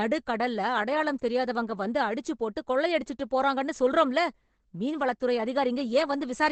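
From start to end, the speech is muffled and hoarse. Nothing sounds above about 8.6 kHz. This is likely Opus compression in its speech mode. The damage is heavy and fits a bitrate near 12 kbps. Bandwidth narrows, and fine detail is lost.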